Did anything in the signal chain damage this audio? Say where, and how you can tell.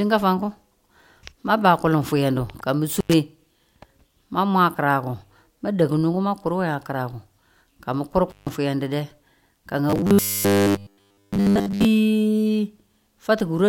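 Yes, two separate problems. The first is an intermittent contact in the analogue wiring, most likely a loose cable or plug. At 2.96 to 3.14 s and again at 8.30 to 8.49 s the speech drops out completely, for about 92 ms the first time and about 147 ms the second. Each gap has a little crackle at its edges where the connection scrapes open and shut, with faint hiss underneath while the line is open.

The second is robotic sound from repeated short buffers, from 9.90 to 11.85 s. The speech there becomes a rigid, metallic buzz pitched at 100 Hz. That pitch means a 10 ms chunk is being replayed over and over. The syllable rhythm still roughly follows the talker, but most of the real audio in that stretch is skipped and replaced by repeats. That points to a likely starvation at the driver or buffer stage, where fresh audio isn't arriving often enough and the last chunk gets reused to fill the gap.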